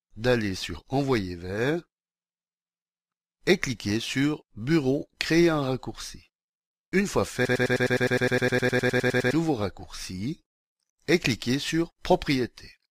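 From 7.45 to 9.33 s a broken-record loop takes over: one 103 ms fragment repeats exactly, back to back, 18 times, and the speech meant for that stretch is lost, likely from a stalled stream resending its last fragment. Unlike echo, repeats never fade.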